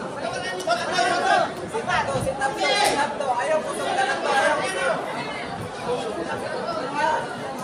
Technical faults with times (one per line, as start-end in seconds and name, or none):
none